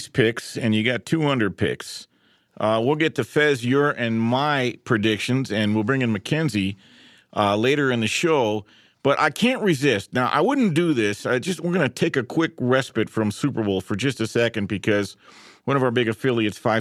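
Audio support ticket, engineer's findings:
No audible fault found in this speech recording. Nothing to trace to any component in the chain.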